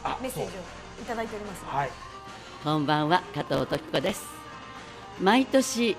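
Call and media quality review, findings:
Processor overload crackle, 3.34–4.13 s. Gritty tearing burst over the audio, stopping when the load clears. Audio processing thread is missing its deadlines: dozens of repeated skipped buffers, each about 0.7 ms, leave hard-edged micro-gaps. Waveform shows dense notches and step discontinuities. Spectrogram shows a smear of broadband vertical lines across that span.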